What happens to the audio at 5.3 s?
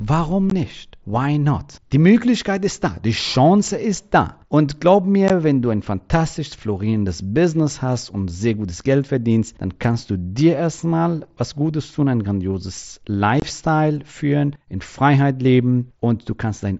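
At 5.28 s the speech drops out for about 15 ms, just before "wenn du ein fantastisch", an unconcealed Bluetooth headset packet loss. Voice packets between headset and phone never arrived, which fits two lost frames, and silence or an idle pattern filled the gap with no concealment, leaving a brief hole with abrupt edges.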